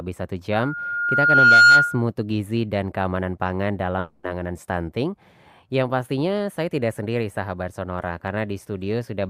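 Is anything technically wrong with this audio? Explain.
Yes, there are two faults in this speech recording.

From 0.53 to 2.03 s there is loudspeaker feedback squeal. The microphone is picking up a loudspeaker that carries its own signal, and at 1.4 kHz the loop gain passes unity, so that frequency feeds on itself. A pure tone swells over roughly a second until it sits about 15 dB above the speech. On a spectrogram it appears as a bright horizontal line at 1.4 kHz that thickens from left to right. The waveform envelope swells steadily under the speech.

From 3.99 to 4.25 s the audio turns into a smeared, buzzy continuation of the preceding sound for about 240 ms. It never drops to silence, and the speech resumes further on with that stretch missing. This is likely a long network dropout: no packets arrived, the receiver's concealment stretched the last audio to cover the gap, and the content was lost. 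On a spectrogram the band shows repetitive, blurred texture instead of normal speech structure. The waveform shows a section of repeated, uniform cycles.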